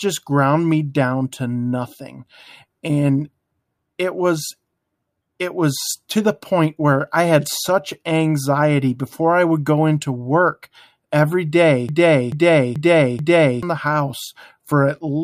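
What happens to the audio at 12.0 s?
A broken-record loop runs from 11.89 to 13.63 s, just after "into work every day". A 0.43 s fragment repeats four times. A stalled stream likely resent it, losing the speech meant for that span.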